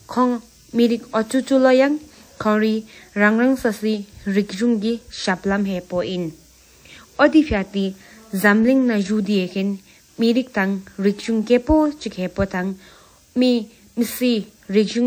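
Throughout the speech there is plainly audible ringing and a washy, breathing hiss around each syllable, likely from WMA compression at a low bitrate near 48 kbps. Long transform blocks smear quantisation noise across tens of milliseconds, so a spectrogram shows gappy, zeroed weak lines and smeared pre-echo before onsets.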